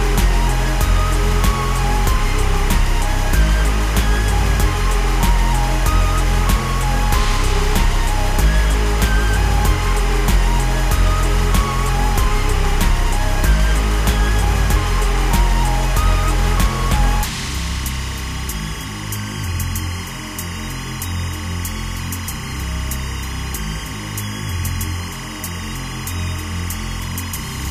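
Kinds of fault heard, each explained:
Timecode bleed: A steady chirping warble runs behind the sound for the whole clip, sitting roughly 15 dB under it and flicking between two pitches near 1 kHz and 2 kHz. This is linear timecode leaking in from a neighbouring track or cable. The code is a square wave whose transitions shift between those two frequencies as the bits change, and the rhythm of the chirping fits 25-frame-per-second code.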